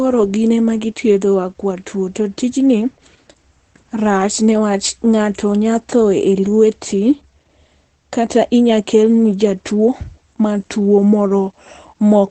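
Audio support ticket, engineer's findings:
Opus voice compression, whole clip. Speech muffled, hoarse, faintly robotic. Nothing above 8.6 kHz. Wideband limit, coarse excitation from the SILK linear-prediction coder. Damage plainly audible. Sound fits a low bitrate, around 12 kbps.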